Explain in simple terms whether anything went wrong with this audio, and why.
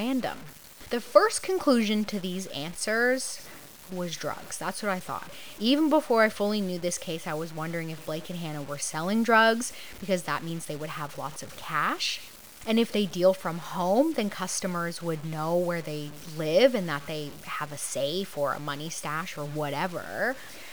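Low bit depth without dither runs through the whole recording, from the first moment to the last. The speech sounds grainy and rough, and the grit rises and falls with the voice, worst in soft passages and at the tails of sounds, where things sputter or drop out. The likely cause is that the audio was stored with only about 7 bits, so each moment was chopped down to a few coarse steps, with no added noise to smooth the rounding error into a gentle hiss.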